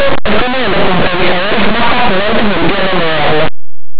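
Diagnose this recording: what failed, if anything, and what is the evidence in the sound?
Harsh, very loud distortion covers the speech from start to finish. This is linear audio read as companded, a sample-format conversion fault: linear 8-bit samples were decoded as mu-law, so values just on one side of zero expand into huge outputs while those on the other side stay small.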